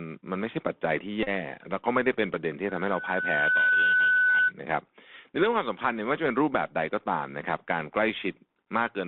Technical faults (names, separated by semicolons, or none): Bluetooth CVSD headset codec; Bluetooth headset packet repeated; loudspeaker feedback squeal